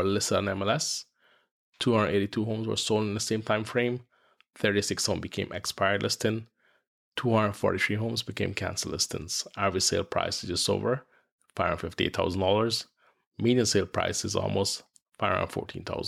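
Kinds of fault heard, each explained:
No kinds of fault are heard in this clip, so there is none to explain.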